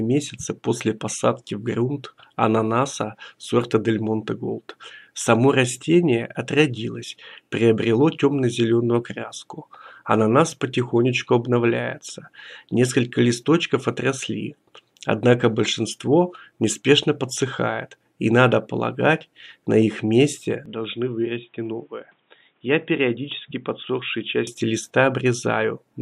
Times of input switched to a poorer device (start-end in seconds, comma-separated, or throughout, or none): 20.66-24.47